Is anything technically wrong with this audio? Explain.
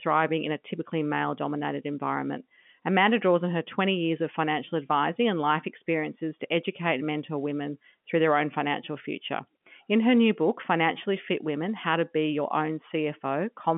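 No, nothing technically wrong can be heard here.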